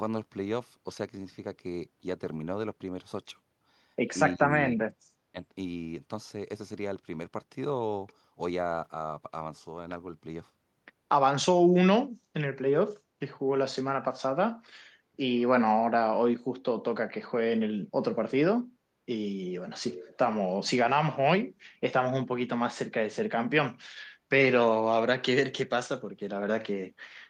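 Between 4.35 and 5.36 s the talker is pushed down three times: at 4.35 to 4.53 s by roughly 15 dB, at 4.76 to 4.87 s by roughly 30 dB, where it nearly vanishes, and briefly at 5.32 to 5.36 s by roughly 10 dB. This is speech suppressed in double talk, likely caused by an echo canceller that cannot separate the near talker from loudspeaker echo while both sides speak and so attenuates everything.

At 12.21 to 12.33 s the room tone dips by about 8 dB for roughly a tenth of a second, then recovers. This is background gated by the echo canceller. While the loudspeaker was active, the canceller clamped the microphone path hard, taking the ambient floor down with it. It released once the canceller let go.

From 19.9 to 20.17 s a faint delayed copy of the speech appears, trailing the original by 408 ms and sitting around 20 dB below it. This is an echo leak, likely from a far end on a loudspeaker whose echo canceller failed to remove everything its microphone captured, so the residue was sent back.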